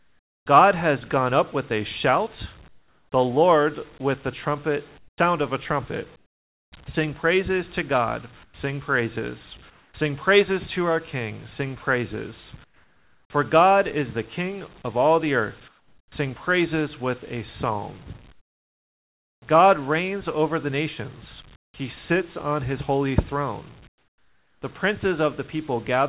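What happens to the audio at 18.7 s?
Comfort noise replaces the background from 18.32 to 19.42 s. The real background, about 30 dB below the loud parts, gives way to a steady, featureless hiss about 27 dB quieter, likely because the sender paused transmission and the receiver synthesised filler noise.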